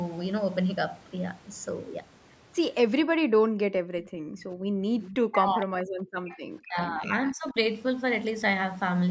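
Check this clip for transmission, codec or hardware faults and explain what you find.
Three kinds of echo-canceller fault appear in this speech, all between 3.05 and 7.56 s.

Background gated by the echo canceller, 3.05 to 4.89 s: while the far end's audio played through the loudspeaker, the canceller pulled the microphone down hard, by about 40 dB at its deepest. The room tone sinks or vanishes for roughly one and a half seconds in total, then returns when the canceller releases. What drops out here is the background, which separates this from double-talk suppression.

Echo leak, 5.01 to 5.16 s: a brief, faint copy of speech arrives 461 ms late, about 15 dB below the talker. The timing points to the other end's loudspeaker being picked up by its microphone, and its echo canceller likely failed to remove all of it before sending it back. The long fixed delay marks it as returned echo, not room reverberation.

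Speech suppressed in double talk, at 5.27 to 5.95 s, 6.17 to 7.04 s and 7.31 to 7.56 s: the talker's own voice dips or breaks up in pieces, by about 40 dB in the first two stretches and about 25 dB in the last. This likely happened because both sides spoke at once, and the canceller, unable to separate near speech from loudspeaker echo, turned everything down. Unlike the gating earlier, here the speech itself is lost.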